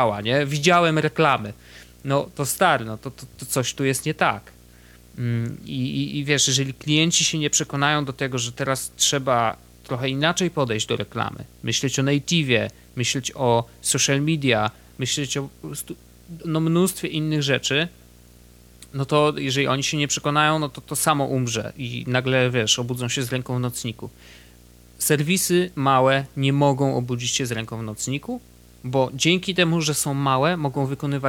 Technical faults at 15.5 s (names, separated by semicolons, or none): video or display buzz